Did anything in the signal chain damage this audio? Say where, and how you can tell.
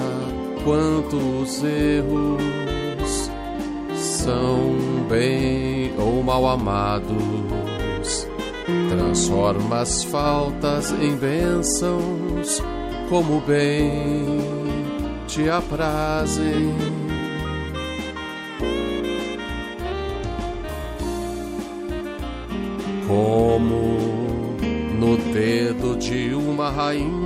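No, nothing along the chain left an audible mark on this one, so there's no stage to point at here.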